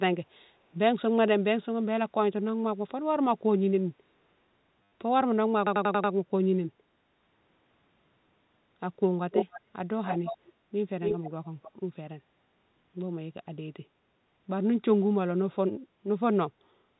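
A speech clip with a packet-loss stutter from 4.83 to 4.92 s. About 90 ms of audio was lost, which fits nine 10 ms packets, and the last packet was replayed in its place. The result is a short robotic buzz, seen as repeated identical waveform blocks on a waveform display. An echo leak follows at 9.31–9.61, 10.03–10.53, 11.01–11.3 and 11.63–11.71 s, likely from a loudspeaker echo canceller letting sound through. A copy trails the speech by 284 ms, near full level at first, about 5 dB lower next and much fainter last, visible as a ghost of the formant pattern shifted right.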